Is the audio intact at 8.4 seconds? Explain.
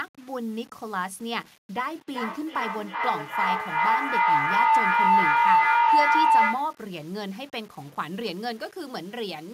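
No. Low bit depth without dither runs throughout this speech, including at 8.4 s. The signal was likely rounded to about 7 bits with no dither, so the error tracks the signal: quiet parts turn gritty and grainy, with noise roughly 25 dB below the speech.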